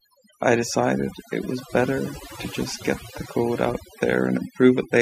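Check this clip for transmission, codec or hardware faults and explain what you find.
Overdone noise removal runs through the whole speech clip. A noise reduction stage was set too aggressively. It pulls individual frequency bands far down or shuts them off whenever their level sits close to its noise estimate, and the quieter parts of the voice are removed along with the noise. The background drops and breaks up into small twinkling specks. On a spectrogram this shows as scattered isolated dots in the gaps and ragged, hollowed-out harmonics.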